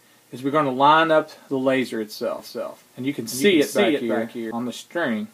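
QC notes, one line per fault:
2.39–4.51 s, doubled audio track: the sound acquires a clean, full-band echo trailing roughly 0.3 s behind, around 5 dB quieter than the original, with no decay or room colour, so it reads as a second copy rather than reverb. It cuts in abruptly at 2.39 s and out just as abruptly at 4.51 s. The likely cause is the same audio being captured a second time through a slower path, or an edit leaving two copies out of step.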